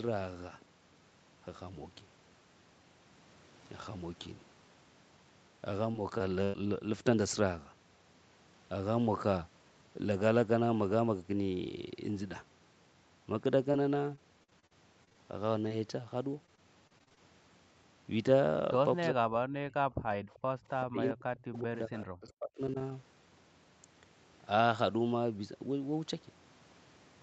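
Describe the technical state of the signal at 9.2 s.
At 9.2 s the speech is intact, with no dropout, distortion or other fault, only the expected call-path band limit with nothing above about 8 kHz.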